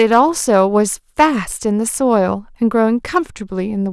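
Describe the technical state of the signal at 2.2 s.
Nothing at 2.2 s points to a fault; the speech signal is intact at that moment.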